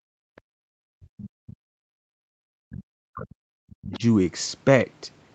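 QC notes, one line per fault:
0.0 to 0.08 s and 0.77 to 4.03 s, speech suppressed in double talk. The speech dips by as much as about 40 dB, briefly at the start and for roughly three seconds later. Both sides likely talked at once, so the echo canceller turned everything down.
0.36 to 0.4 s and 3.92 to 3.99 s, other side's voice leaking through. A faint second voice appears, about 40 dB below the speech at first, then louder at about 20 dB below. This is likely loudspeaker echo the canceller left in.
0.41 to 0.49 s, background gated by the echo canceller. The room sound drops by about 38 dB for well under a tenth of a second, then returns. The canceller clamped the microphone hard while the loudspeaker played, then released it.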